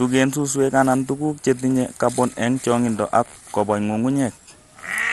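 Throughout the speech, nothing sounds above about 12.2 kHz, and a gurgling, granular distortion persists, likely MP2 compression at a low bitrate, fitting roughly 64 kbps.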